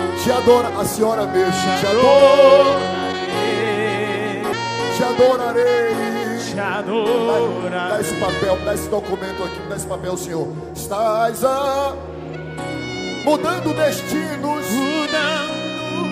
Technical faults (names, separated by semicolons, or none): none